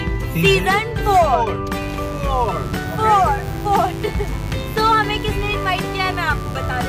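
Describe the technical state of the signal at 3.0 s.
At 3.0 s the signal carries mains buzz, present from 1.82 s to the end of the clip. Sharp switching spikes at twice the 50 Hz mains rate add harmonics reaching several kilohertz, heard as a steady, raspy buzz roughly ten decibels below the wanted sound.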